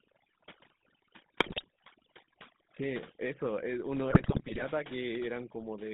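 From start to finish the speech runs through the GSM full-rate codec at 13 kbps. It rebuilds the voice from coarse pulses in a 150 Hz to 3.7 kHz band, so it comes out buzzy and gravelly.

Overdone noise removal sits on top of that the whole way. Bands near the noise estimate get gated away, leaving a lowered background that breaks up into twinkly specks.

GSM bit errors hit twice, first at 1.4–1.64 s and then, longer and milder, at 4.1–4.65 s. Corrupted filter, pitch and gain values reach the decoder, so the voice bursts into squawks, pops and gargling.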